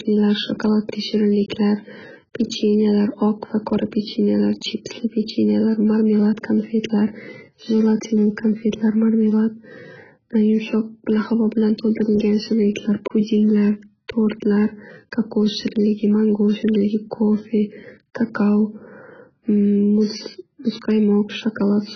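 Speech that sounds dull, smeared and warbly from start to finish, with nothing above 6.8 kHz and fizzy sibilants, likely heavy AAC compression at a very low bitrate, around 12 kbps.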